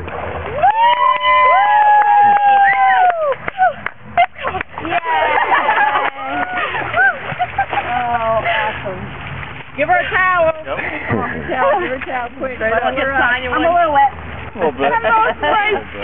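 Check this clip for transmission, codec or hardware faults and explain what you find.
One fault runs through the whole clip: aliasing. The audio was resampled to a much lower rate without an anti-aliasing filter, which fits a drop to about 6 kHz. Content above the 3 kHz fold point reflects back as unrelated, inharmonic tones, sitting only about 15 dB below the wanted sound. The high end sounds gritty and metallic, with energy crowding right up to the 3 kHz band edge.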